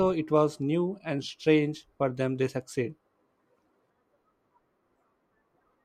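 No technical faults are audible.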